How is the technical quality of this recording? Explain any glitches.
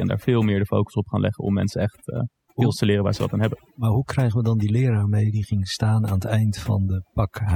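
The main problem is overdone noise removal, running the whole way through. The denoiser was pushed too hard, killing bands near its noise estimate, so gaps go near-silent with twinkling specks and quiet parts of the voice drop out with them.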